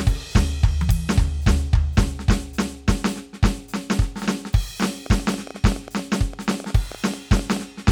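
A music recording carries a train of clicks from 5.06 s to 7.58 s: about thirty near-identical sharp ticks at roughly 10.8 per second, unevenly spaced and peaking around 5 dB above the music, so they are heard over the music and in its pauses too. Their matching shape and steady density set them apart from random vinyl-style crackle or isolated dropouts. The likely cause is electrical interference from nearby equipment or a faulty connection or power supply injecting repeated pulses.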